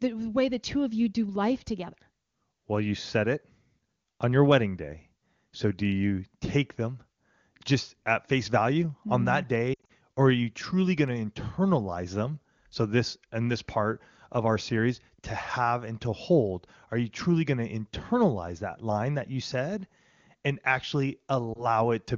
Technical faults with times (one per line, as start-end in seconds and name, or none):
9.74-9.92 lost AMR speech frames
21.53-21.67 lost AMR speech frames